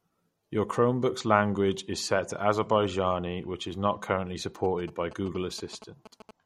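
Throughout the speech, the treble stops abruptly at 16.8 kHz, and the sibilants have a watery, swirling quality with plainly audible metallic chirps. This is most likely MP3 compression at a low bitrate, consistent with about 48 kbps. The encoder discards the top band and switches weak frequency lines on and off from frame to frame. A spectrogram shows a flat ceiling at 16.8 kHz and patchy, blocky holes in the upper energy.

From 4.64 s to 6.31 s, right after "which is not currently", a GSM signalling burst pattern breaks in. A nearby 2G phone exchanging control traffic sends short clusters of radio bursts, and the audio circuitry rectifies them into a galloping dit-dit-dit of short 217 Hz buzzes about 15 dB below the speech. The waveform shows regularly spaced spike trains, and the spectrogram shows evenly spaced vertical lines with harmonics stacked on 217 Hz.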